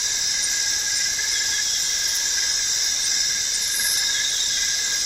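From 2.5 s to the end, the sound turns coarser and duller, with a rough, watery texture and less top-end sparkle. This is a call bitrate drop. The call's bandwidth estimate fell, so the encoder was told to cut its rate from 64 kbps to 27 kbps. With fewer bits, the Opus encoder codes each frame more crudely and trims high frequencies. The rate stays at its lowest for about 1.7 s.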